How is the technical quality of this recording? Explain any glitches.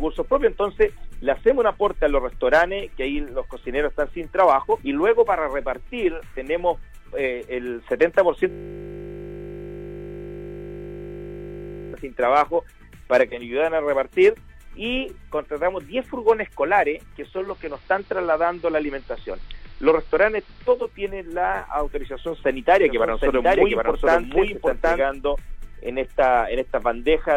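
The recording has three distinct glitches.

From 8.50 to 11.94 s, the sound freezes into a steady 50 Hz buzz. This is a system hang loop: the system stalled while the audio hardware kept replaying one 20 ms buffer.

From 17.16 to 21.04 s, faint hiss comes in with a dip of about 1 dB. This is digital radio blending to analogue AM, cross-fading over 412 ms.

From 22.82 to 25.12 s, an equally loud copy follows roughly 0.7 s behind, starting and stopping abruptly. This is likely a doubled audio track from a second capture path.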